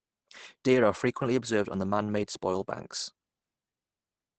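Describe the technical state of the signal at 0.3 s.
At 0.3 s the speech carries Opus compression, present across the whole clip: muffled, hoarse and thin, with nothing above 8.7 kHz. Unlike MP3's swirling holes, this roughness is likely from the speech-mode coder at a low rate, which fits about 16 kbps.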